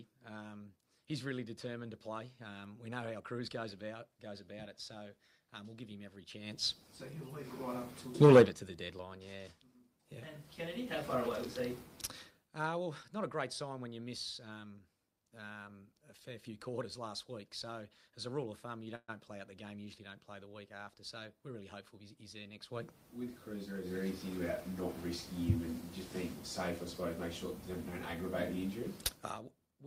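A call audio freeze runs from 18.95 to 19.10 s. The last sound before it stretches into a short buzzy tail of about 127 ms that fades into roughly 30 ms of silence. When the audio resumes, it picks up exactly where it left off with nothing skipped, so everything after this point plays about 127 ms later. This pattern likely comes from packets stalling in transit until the jitter buffer ran dry.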